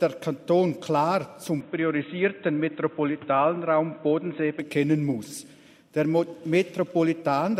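Between 1.6 s and 4.6 s the audio turns dull and boxy, with nothing above 3.8 kHz and a new noise floor roughly 30 dB below the signal, then clears again. This is likely an input switched to a poorer device. The level holds steady and the changeover has no silence. On a spectrogram the upper band is abruptly cut off for that stretch, while the waveform envelope barely changes.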